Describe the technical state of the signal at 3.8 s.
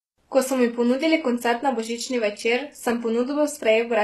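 At 3.8 s the treble sounds synthetic: s sounds come out gritty and lispy, with a metallic sheen, and nothing survives above 12.3 kHz. This is likely HE-AAC compression, present for the whole clip, at a level that fits a very low bitrate around 16 kbps. The codec codes only the lower spectrum and rebuilds the highs by copying lower bands upward under a coarse envelope, so the upper harmonics no longer line up with the real ones.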